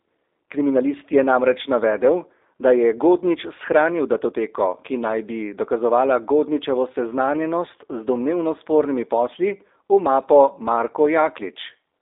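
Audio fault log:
Throughout, G.729 codec: the speech sits in a narrow phone band, roughly 300 Hz to 3.7 kHz, with a plainly rough, slightly synthetic edge. That's the sound of speech rebuilt from a vocal-tract model plus sparse pulses, which fits an 8 kbit/s stream.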